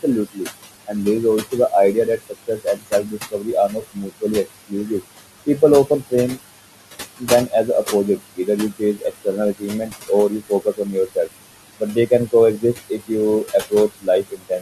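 The background pumps down between phrases and swells back under the speech. These are noise suppressor artifacts: the room noise, sitting about 11 dB below the speech, is pulled down by about 18 dB frame by frame, so the floor keeps shifting.

Soft sounds are swallowed, dropping by about 15 to 21 dB, at 0.03–0.47 s, 1.42–4.91 s just after "there is", 5.46–6.38 s, 7.19–7.85 s, 8.17–11.29 s, 11.79–13.11 s and 13.44 s to the end. This is speech cut by the noise suppressor, which treats quiet consonants and endings as noise.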